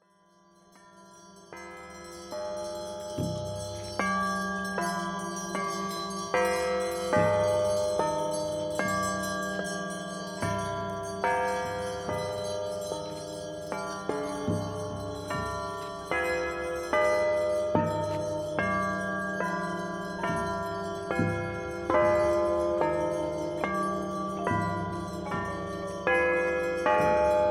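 Nothing stood out as a technical fault on listening.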